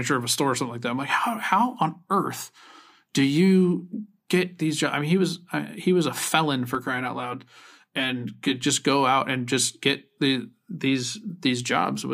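From 6.75 to 8.64 s, between "he was a felon" and "go out and just", the speech turns hollow and phasey. This is channel delay with comb filtering. One channel runs roughly 10 ms behind the other, and summing them to mono cancels shared content at regularly spaced frequencies, starting around 50 Hz. Unlike flanging or a phaser, these notches stay fixed rather than sweeping. Unlike room reverb, there is no audible tail.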